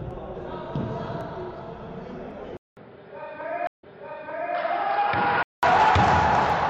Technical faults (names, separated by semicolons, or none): input switched to a poorer device; stream reconnect